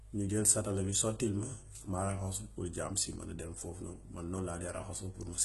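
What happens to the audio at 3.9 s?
At 3.9 s, as throughout the speech, the treble is gritty and lispy, with nothing above 11.8 kHz. This is likely HE-AAC compression at a very low bitrate, near 16 kbps, rebuilding the highs by copying lower bands upward. Unlike a plain low-pass, the top still sounds bright but metallic.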